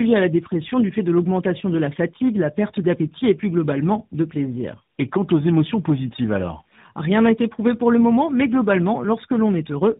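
From start to finish the speech carries tandem speech coding: it sounds like it went through two speech codecs in a row, probably GSM-style then AMR. Each re-encode degrades the last, so it's rough, muffled and warbly, with nothing above 3.8 kHz.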